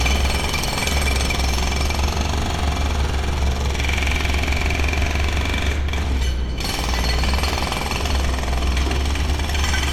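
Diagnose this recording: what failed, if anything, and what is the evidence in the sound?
Nothing failed: across the whole recording of sounds there is no audible evidence of trouble at any stage of the chain, from capture through to playback.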